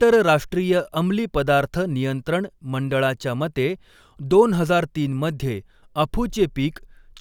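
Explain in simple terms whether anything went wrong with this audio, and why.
Nothing went wrong with this audio; the speech has no faults to point to.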